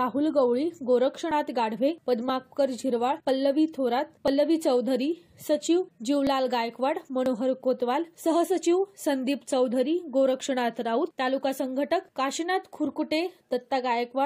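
Short skips come at 1.31, 2.29, 3.29, 4.28, 6.27, 7.26 and 8.24 s. Each is an overlap between stream segments. The timestamps of neighbouring segments claim the same stretch of time, so the player trims the overlap. That sound was never actually doubled, so between 5 and 19 ms of real audio is lost each time. The waveform jumps at the join, heard as a tiny skip. The spacing of about one second points to one-second segments.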